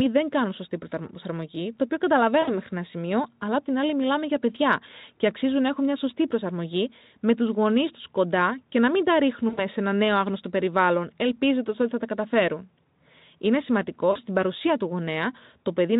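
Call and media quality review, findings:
VoIP packet loss concealed by the speech codec, three spots. 2.41–2.58 s, after "σωστή προσαρμογή το οποίο": buzzy or noisy smear fading out, about 60 ms of missing audio. 9.49–9.66 s, before "σε ένα νέο άγνωστο": same, longer, about 80 ms gone. 14.11–14.18 s, before "παρουσία του": shorter, about 40 ms. Decoder stretching the last pitch/filter with falling gain, weak recovery after. Speex underneath sounds clean at this rate.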